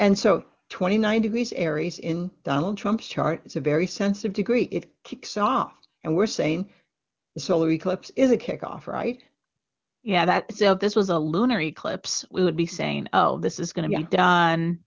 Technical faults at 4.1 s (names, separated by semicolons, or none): none